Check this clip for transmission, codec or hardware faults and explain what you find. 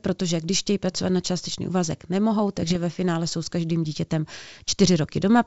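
One fault stands out, a short burst of bit errors on an ADPCM link between 2.62 and 2.77 s, in speech carried over G.722 wideband coding at 64 kbit/s that sounds clean up to its 7 kHz ceiling.

For about 0.15 s, at a low error rate, flipped bits corrupt the ADPCM codes. Each bad code also knocks the decoder's step size and predictor off track, so the damage rings on for some milliseconds before the decoder settles. The result is pops and a rough, gritty burst with brief jumps in level. Packet loss would instead leave a gap or a smoothed-over concealment; here the sound keeps going but turns harsh.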